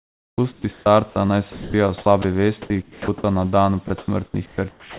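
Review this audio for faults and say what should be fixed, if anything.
The sender's voice detector likely switched transmission on and off repeatedly, producing sound chopped by the voice detector in four stretches: 0.00–1.16 s, 1.52–2.24 s, 2.62–3.24 s (just before "na dan"), and 3.88–4.99 s. In each, quiet parts of the speech were dropped and filled with comfort noise, about 700, 320, 400 and 610 ms respectively. Syllables sound clipped, all within the narrow telephone band, with nothing above 4 kHz. Lowering the detector's threshold and lengthening its hangover time, or disabling discontinuous transmission, would prevent this.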